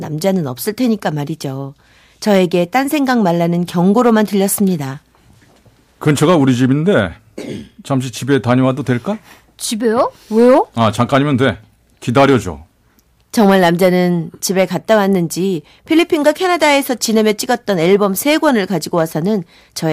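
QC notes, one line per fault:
throughout hard clipping: the speech reached a stage about 6 dB hotter than it could pass, so around one percent of samples have their peaks cut flat. Those squared-off tops add harmonics high in the spectrum, heard as crackle on the loudest peaks.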